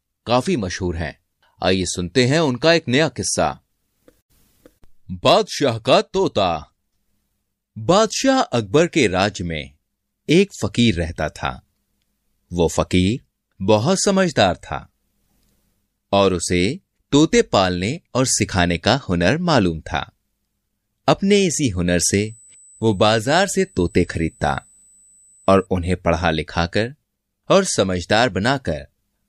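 A thin, fixed-pitch whine at 8 kHz sits under this speech clip from 22.27 to 25.67 s, roughly 30 dB below the voice. This is USB whine: the bus's 125-microsecond microframes draw current that leaks into the audio through shared power or ground.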